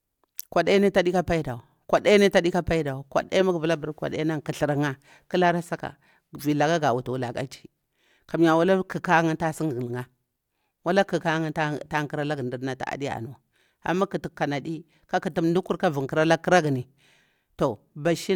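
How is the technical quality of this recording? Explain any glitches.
The technical quality of this recording is sound, with no glitches to explain.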